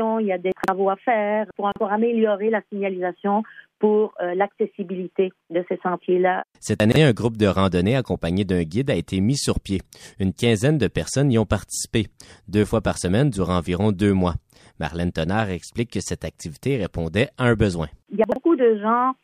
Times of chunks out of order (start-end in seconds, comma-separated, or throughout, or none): 0.52-0.68, 1.72-1.80, 6.80-6.96, 18.24-18.36